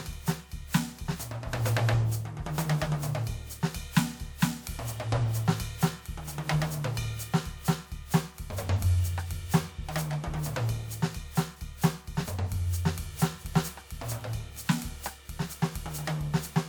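Generation loss runs through the whole of this music clip, from start to finish. It was likely caused by decoding and re-encoding the audio around seven times, each pass re-quantising on a shifted frame grid so that the errors pile up. The character fits a WMA-type codec at about 128 kbit/s, though the sound is more swirly, smeared and hollow than that rate would explain. Transients lose their edges, and content still extends to about 20.1 kHz.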